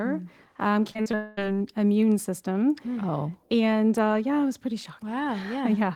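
From 0.91 to 1.15 s the speech turns choppy. This is repeated packet loss: a handful of short holes, the longest about 37 ms, arrive in quick succession, and each is papered over by extending the preceding sound. Around 40 percent of this stretch is that patched-in material, adding up to roughly 95 ms of filler covering about 120 ms of missing audio.

Immediately after, from 1.15 to 1.40 s, the speech gives way to a continuous synthetic extension of the last sound, lasting about 220 ms and never falling to silence. The likely cause is a long network dropout: the original audio for that span did not arrive, so the receiver kept generating a stand-in until real audio resumed. The lost material is simply absent, and the return lands about 10 ms later than the original timing.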